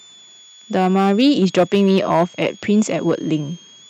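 Right from the start there's a switching supply whistle sitting under the speech, a thin high tone wandering between about 3.2 and 3.5 kHz. That's a power supply running in an audible burst mode or beating against another, and it's roughly 30 dB below the talker.

Hard clipping runs all the way through too. The level is pushed about 8 dB past what the chain can pass, so a couple of percent of samples get their tops shaved flat. The louder syllables pick up a crackly, gritty edge from those added high harmonics.

There's also clock drift between sender and receiver for the whole clip. The sender's clock runs about one and a half percent slow, so the receiving jitter buffer keeps draining and has to be topped up. The timing never quite settles, and little irregular hitches show up instead of a steady pace.

That shows up as repeated timing corrections from 0.16 s to 3.75 s. The receiver keeps stretching things by repeating small slices, playing at about 98% speed and adding roughly 70 ms overall. 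These corrections are unevenly spaced.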